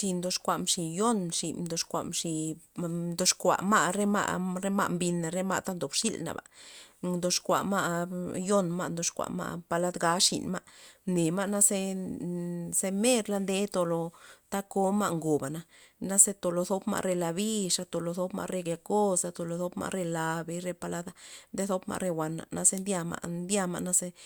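No technical faults are audible anywhere in this speech recording.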